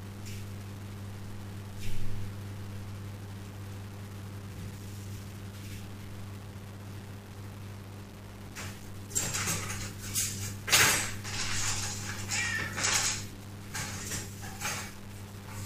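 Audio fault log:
Throughout, low bit depth without dither: grainy distortion that follows the sound, noise at about 20 dB below it, likely from rounding to 7 bits without dither.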